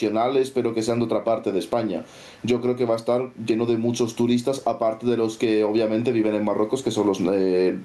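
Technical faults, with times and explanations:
Throughout, gain pumping: the gain is pulled down by about 15 dB under loud speech, likely from overly high gain driving a fast limiter.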